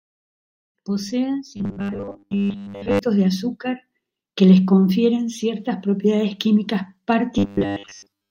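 Speech with robotic sound from repeated short buffers, from 1.57 to 2.99 s, before "de azúcar que les", and from 7.38 to 8.30 s, after "confieren ciertas propiedades químicas". A rigid 100 Hz buzz replaces most of the sound, likely from a 10 ms chunk being repeated while fresh audio was late.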